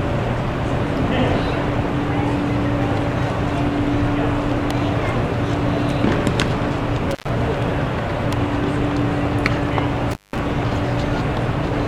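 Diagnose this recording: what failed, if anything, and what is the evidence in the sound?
Intermittent contact in the analogue wiring, at 7.11 to 7.29 s and 10.11 to 10.39 s: a loose plug or cable opens briefly, dropping the audio for about 107 ms and 164 ms respectively, with crackle at the edges of each break where the connection makes and breaks.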